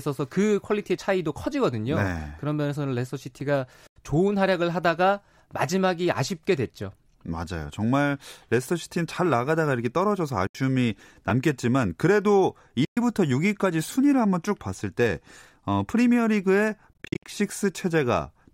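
At 3.40 s there is a block of digital silence about 6 ms long, which fits a 256-sample buffer that was not filled in time. The speech cuts straight to silence and back, so it sounds like a single tick rather than a gap. A shorter block at 11.30 s, under 2 ms, is just a click.

From 3.87 to 3.96 s, 10.47 to 10.55 s and 12.85 to 12.97 s the speech drops out for about 87, 73 and 116 ms. From 16.93 to 17.26 s, a broken run of losses totalling about 189 ms is spread over roughly 0.3 s, with the longest piece 58 ms. These are likely Bluetooth dropouts, where late packets were discarded. The speech resumes further along, as if it had kept playing, and the holes are long enough to hear as missing sound rather than ticks.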